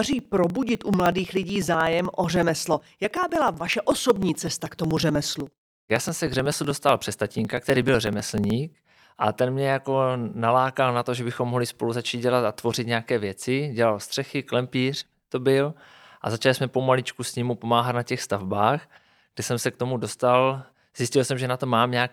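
From 0.07 to 8.50 s, periodic USB or driver dropouts skip roughly 2 ms every 0.062 s, giving evenly spaced ticks during the speech, unlike random glitches.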